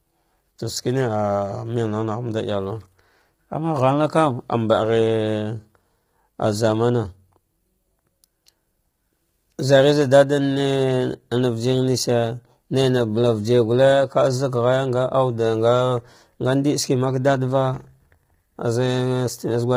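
A speech recording runs through low-delay AAC compression for its whole length, most likely an AAC-ELD encoder of the kind used for video calls, starved of bits and heavily damaged. With a low-delay window, the coder cannot separate the voice's pitch harmonics cleanly, so noise fills the gaps between them. The voice sounds rough and grainy, with a dulled, synthetic top band, which fits a bitrate around 24 kbps.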